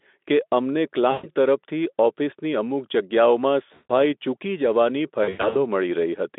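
VoIP packet loss concealed by the speech codec at 1.11–1.29 s, 3.74–3.91 s and 5.23–5.56 s. About 120 ms, 160 ms, then 220 ms scattered across 320 ms of the narrowband line are lost. The decoder extrapolates each gap into a fading buzzy tone or coloured noise rather than leaving clean silence.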